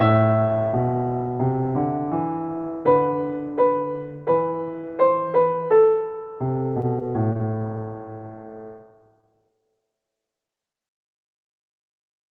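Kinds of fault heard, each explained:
Repeated packet loss (robotic sound): From 6.81 to 7.80 s the sound turns choppy, with small pieces dropping out again and again. Packets kept going missing. Each hole, the longest 28 ms, was patched by extending the preceding sound before the next loss hit.
Short concealed packet loss: At 9.21–9.25 s and again at 10.47–10.51 s there is a brief smear where about 20 ms of sound vanishes. That audio never reached the decoder in time, so the receiver continued the previous sound and blended back.
Short stall from a late packet: At 10.55–10.59 s a sound is held slightly too long, for 22 ms, yet nothing is lost. One packet arrived late, the jitter buffer ran dry, and the receiver stretched the last sound until it came.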